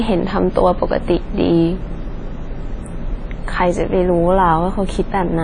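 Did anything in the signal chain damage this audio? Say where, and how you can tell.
Yes. The damage sits at the codec stage and runs through the whole speech clip. Nothing is present above 10 kHz, so the top octave is simply missing. The sound rings and smears, with a washy hiss that rises and falls with the signal. That points to a transform coder with long blocks spreading quantisation noise over tens of milliseconds, likely WMA compression at a low bitrate around 32 kbps, where weak spectral lines get zeroed.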